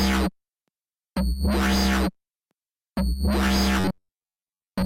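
A short clip that turns to robotic sound from repeated short buffers at 3.80 to 4.86 s, a metallic buzz at 93.8 Hz, likely from a roughly 11 ms chunk repeating over most of it.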